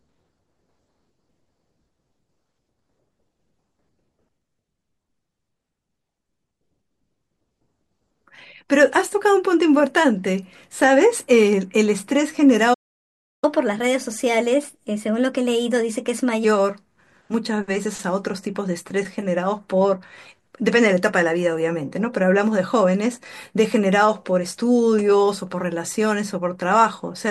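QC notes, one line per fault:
12.73–13.44 s, playback stall: the speech halts mid-flow into about 0.69 s of silence, then resumes exactly where it stopped. Nothing is skipped, which separates it from a dropout. The likely cause is the player running short of data or its thread being blocked.
13.44–16.44 s, catch-up at higher speed: right after the stall the speech runs at 1.15 times normal speed and sits roughly two semitones higher while the player resamples its backlog to regain time. Speed and pitch rise together, then return to normal.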